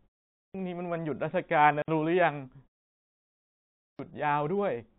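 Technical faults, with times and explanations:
0.49 s and 3.94 s, clipped start after a pause: both times the sound comes in abruptly out of silence with its opening chopped off, about 55 ms lost at 0.49 s and about 52 ms at 3.94 s. The first follows half a second of quiet, the second a pause of about 1.3 s. That's the output device dozing off during the silence and needing a moment to wake and lock before it plays again, so whatever arrives first just gets swallowed.
1.82 to 1.88 s, packet loss filled with silence: a 60 ms hole drops into the speech, cut in and out with hard edges. Sixty milliseconds fits three consecutive 20 ms packets going missing, and rather than covering the gap with anything, the receiver simply played dead silence where they should have been.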